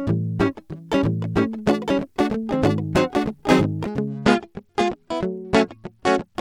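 From 0.96 to 3.84 s the music plays twice: a doubled audio track, a dry copy about as loud trailing roughly a second behind, likely from a second, slower capture path. Then from 4.09 to 6.35 s there's a Bluetooth SBC bit pool drop: the treble goes dull and gritty, consistent with the encoder falling from bit pool 31 to 14, around 99 kbps.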